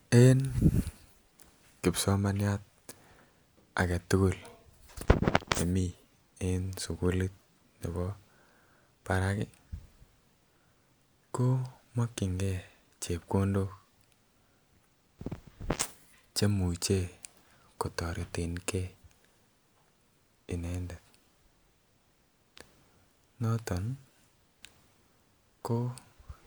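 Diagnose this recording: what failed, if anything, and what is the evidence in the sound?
Nothing failed: no stage in the chain leaves any audible evidence of a fault in this speech recording.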